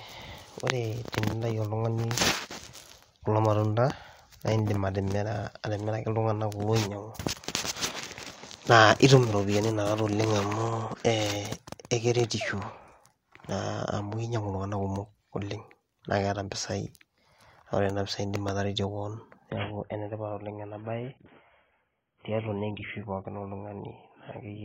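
At 19.50 s the speech suddenly loses its top end and picks up a swirly, coded edge that lasts to the end at 24.65 s. That's an adaptive stream at a lower bitrate: nothing survives above 3.8 kHz, which fits a switch from roughly 96 kbit/s AAC down to about 16 kbit/s, with no gap.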